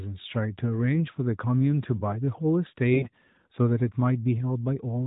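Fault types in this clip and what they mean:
AMR bit errors: Between 2.94 and 3.09 s, about 160 ms of the speech, a run of narrowband mobile frames arrived with their weakly protected bits corrupted at roughly 7 percent. The frames still passed the integrity check on their key bits, so the decoder used them. It placed its excitation pulses wrongly and got the fine pitch, gain and spectral detail wrong. The voice keeps its rough pitch and loudness but turns hoarse and gargly. That is what separates this from a dropped frame, which gives a gap or a smoothed-over concealment instead. The codec itself adds only light damage at 12.2 kbps.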